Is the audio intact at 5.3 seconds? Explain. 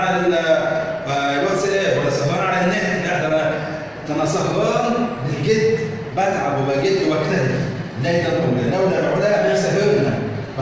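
No. The moment at 5.3 s falls inside a run of repeated timing corrections that lasts from 0.28 s to 10.54 s. The receiver keeps inserting repeated short pieces of audio to stay in step, which lengthens the passage by something like 150 ms in total and leaves it playing at 99% speed. What marks this out from packet loss or dropouts is that every edit goes the same way, stretching the audio and never removing any, and they arrive at uneven intervals rather than as isolated gaps. If heard at all, the effect is a tempo that sags a little and small repeated hiccups, not holes or bursts of noise.

The cause is clock drift between sender and receiver. The sender's audio clock runs roughly 1.5% slower than the receiver's, so the jitter buffer keeps draining and must be topped up with repeats throughout the clip. A burst of network jitter would produce clustered corrections in both directions. This instead sets a steady one-way pressure that shows up as unevenly spaced edits that all go the same way. 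The call path's G.722 coding, with nothing above 8 kHz, is a separate matter and plays no part in these hiccups.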